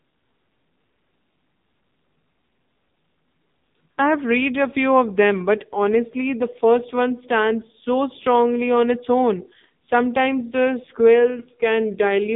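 AMR narrowband mobile codec damage runs throughout: the speech sits in a phone band of about 150 Hz to 3.7 kHz with nothing above, and the heavy buzzy, synthetic coloring from a pulse-driven vocal-tract model points to a low mode near 6.7 kbps.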